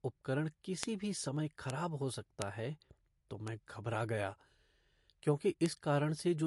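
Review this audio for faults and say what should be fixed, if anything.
The speech sounds watery and swirly throughout, with nothing above 11.3 kHz. This is likely MP3 compression at a bitrate near 54 kbps: the encoder cut the treble and left weak frequency lines flickering. The constant smear distinguishes it from brief dropouts. Encode at a higher bitrate or keep a lossless master.

Bit error spikes sound as single sharp ticks at 0.83, 1.70 (just after "भी समय"), 2.42 (just before "है तो"), 3.48 (just after "है तो") and 5.66 s. Each is a flipped bit spanning one to three samples. Being broadband and unrelated to the signal, they differ from codec chirps. Use error-checked storage and links.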